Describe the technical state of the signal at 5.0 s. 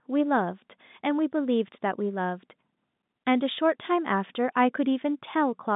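At 5.0 s the speech is intact, carried in the ordinary G.711 telephone band, with nothing above about 3.8 kHz.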